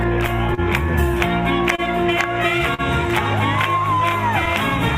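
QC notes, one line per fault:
Throughout: clock drift between sender and receiver. The sending clock runs roughly 3 percent slow, so the jitter buffer keeps draining and the receiver repeatedly stretches or repeats tiny slices. Unlike a single stall, these small timing hiccups recur at uneven intervals across the whole clip.
0.54 to 0.60 s, 1.76 to 1.80 s, 2.74 to 2.81 s: short stall from a late packet. Each time the buffer ran empty and the last sound was held for about 34, 26 and 43 ms, then resumed where it left off. Nothing is skipped, unlike a dropout. Each held stretch adds a slight buzz or dip.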